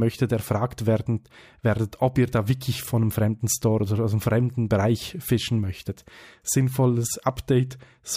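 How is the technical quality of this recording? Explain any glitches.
No glitches, dropouts or other faults can be heard anywhere in the recording.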